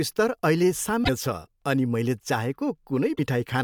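A brief glitch cuts into the speech from 1.03 to 1.09 s, between "स्तर अहिले" and "छ अनि", and another from 3.12 to 3.19 s. Both are damaged data in a compressed stream: corrupted frames threw the decoder out of sync until it found the next valid frame header.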